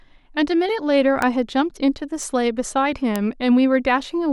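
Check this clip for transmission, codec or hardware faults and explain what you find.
Three isolated bit error spikes occur in the speech, at 1.22 s, 2.23 s and 3.16 s. Each is a single flipped bit that throws one sample, or three in a row at 1.22 s, a power of two away and straight back, peaking at about -8, -14 and -2 dBFS. Each sounds like a brief broadband tick, unrelated to the speech.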